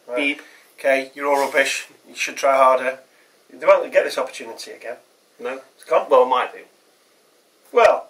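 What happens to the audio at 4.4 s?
Nothing goes wrong at 4.4 s; the audio runs through that moment intact, with no dropout, click or other fault.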